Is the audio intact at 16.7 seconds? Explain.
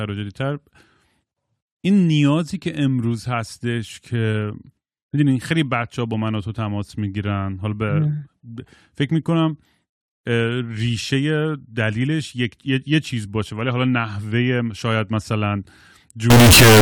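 No. From 16.30 s to 16.81 s the speech becomes a float read as integer fault. The likely cause is 32-bit float samples decoded as 32-bit integers. The waveform turns nearly square at an almost fixed, high level. It sounds very loud and harsh, with background noise as loud as the speech, though pitch remains traceable.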